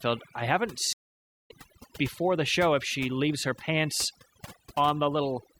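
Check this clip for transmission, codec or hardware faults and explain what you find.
Two faults are present: heavy-handed noise removal across the whole speech clip, and a stream reconnect early on.

Overdone noise removal runs throughout. The suppressor was set too aggressively, shutting off individual frequency bands whenever they dropped near its noise estimate and taking quiet speech components with them. The background collapses into near silence with twinkling specks.

A stream reconnect occurs from 0.93 to 1.51 s, after "I haven't". The connection dropped, playback went silent for about 0.54 s, and a fresh decoder picked up mid-stream, resuming at "before the show if" roughly a third of a second later, so that stretch of speech is missing.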